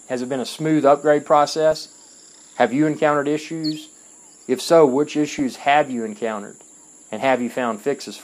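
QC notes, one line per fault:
1.71–1.81 s and 5.29–5.39 s, DAB burbling: two brief bursts of noise blips, about a tenth of a second each. Bit errors from weak reception got past error correction into the MP2 data, so wrong samples put short blips of noise in single sub-bands, and bad scale factors make sub-bands jump in level for up to a frame.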